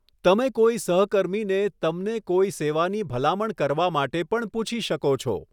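A short bit of speech, and there's nothing technically wrong to flag anywhere in it.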